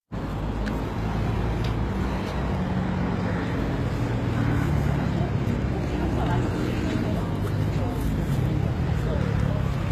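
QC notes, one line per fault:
Throughout: HE-AAC compression, likely the cause of the plainly audible damage across the whole clip. The treble sounds bright but synthetic, with a gritty, metallic edge that fits spectral band replication. The upper bands are copied up from lower content and shaped only by a coarse envelope, so their harmonics do not line up with those below the crossover. The damage level points to a low bitrate, around 20 kbps.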